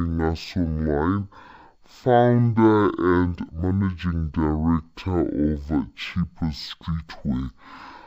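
From start to finish the speech crawls at half speed and sits a full octave low, with a faint mirrored image in the upper spectrum. This is stereo read as mono: interleaved left and right samples were played one after another as a single channel.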